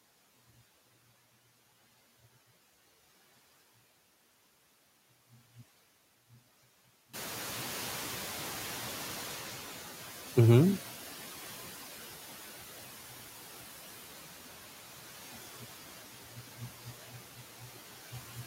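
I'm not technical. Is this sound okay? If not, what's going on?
No. At 7.13 seconds the background room noise suddenly gets louder, and the noise suppressor catches up only slowly. For about four and a half seconds the noise comes through with less reduction, then fades back down by 11.64 seconds as the suppressor adjusts.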